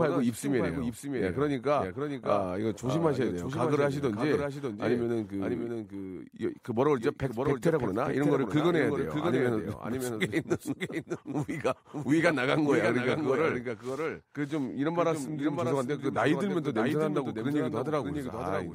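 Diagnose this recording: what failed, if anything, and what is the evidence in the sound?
Every phrase of the speech is followed by a second, clean copy of itself about 0.7 s later, a few decibels quieter, with no room tail, across the whole clip. This doubled audio track is likely a capture-routing fault at the driver or buffer stage, where a slower second path records the same signal and is mixed back in.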